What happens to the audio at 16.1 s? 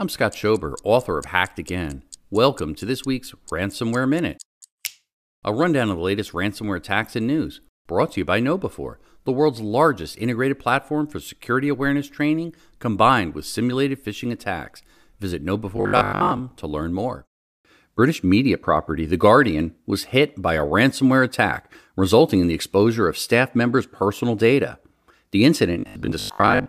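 The voice collapses into a rigid, metallic buzz pitched at 50 Hz from 15.77 to 16.41 s, ending just before "to learn more". This is robotic sound from repeated short buffers, likely a 20 ms chunk looped while most of the real audio is skipped.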